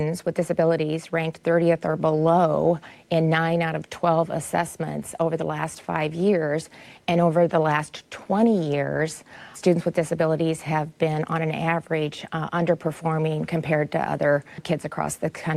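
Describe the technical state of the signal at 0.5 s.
At 0.5 s the signal is intact, with no audible fault at that moment.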